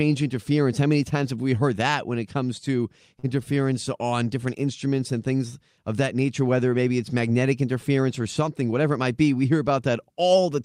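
At 3.19 to 3.31 s, after "when it comes to", a short stall from a late packet holds the sound about 40 ms with a slight buzz or dip; the spectrogram shows frozen, flat harmonics.

From 8.62 to 8.99 s, between "it's magnetic interference or" and "might be", a jitter buffer speed-up trims pitch periods, running about 111% with unchanged pitch; the waveform looks compressed.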